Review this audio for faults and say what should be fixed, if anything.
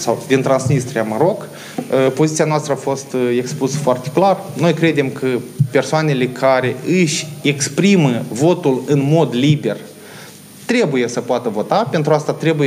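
Nothing here needs fixing, since no faults turn up anywhere in the audio, so it can be left as it is.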